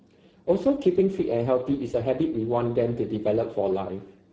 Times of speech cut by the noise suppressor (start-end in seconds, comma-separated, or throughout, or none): none